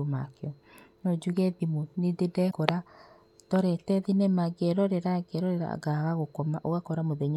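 Damaged data in a compressed stream appears from 2.47 to 2.54 s, a burst of roughly 66 ms in the speech. The encoded bytes at that point are corrupted, so the decoder misreads the affected frames, loses its place in the bitstream and has to hunt for the next valid frame header before playback resumes. It comes through as a short, harsh chirp or blip that breaks the flow of the speech.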